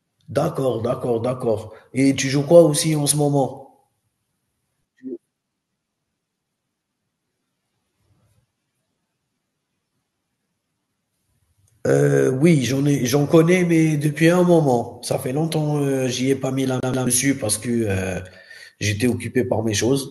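At about 16.80 s the speech catches like a CD stuck on one turn: roughly 130 ms of audio repeats twice, with tiny mutes at each jump, until 17.07 s.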